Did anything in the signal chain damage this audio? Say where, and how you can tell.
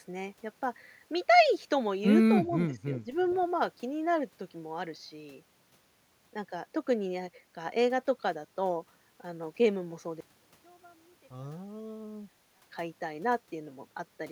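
Yes. In call processing, the echo canceller likely misjudged double talk, causing speech suppressed in double talk: the speech dips by around 10 dB at 2.44–2.85 s and 3.04–3.08 s.

Echo leak, also in call processing: a loudspeaker-side canceller likely passed residual pickup back, giving a faint copy, roughly 30 dB down and 331 ms late, at 3.21–3.45 s.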